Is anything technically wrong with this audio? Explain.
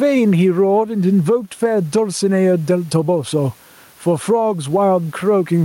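Yes. Gain pumping runs through the whole speech clip. The likely cause is input gain set far too high for the microphone, with a fast limiter or compressor clamping the level every time the talker gets loud. The result is a gain swing of roughly 10 dB, with the room noise sitting about 40 dB below the speech, and the speech itself sounds flattened and squashed.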